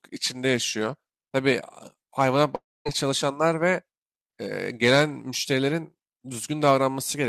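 A speech recording with one clear break: from about 2.55 s to 2.87 s the sound stops carrying on naturally. The last bit of sound gets stretched into a fading buzz, which dies away into roughly 230 ms of silence, and when the speech picks up again about 300 ms of it is just gone. That's most likely a long network dropout, where the receiver papered over the missing audio until fresh audio turned up.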